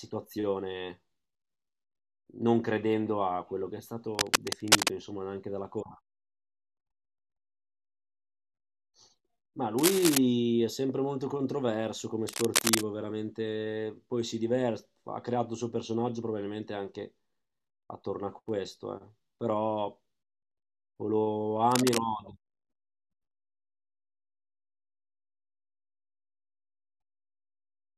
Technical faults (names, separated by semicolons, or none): cable scratch noise